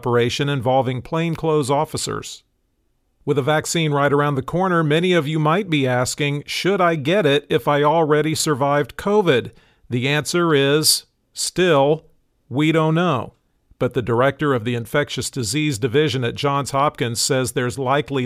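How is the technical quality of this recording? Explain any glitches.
No glitches can be heard anywhere in the recording; the signal stays steady and intact throughout, with no dropouts, interruptions or other technical faults to explain.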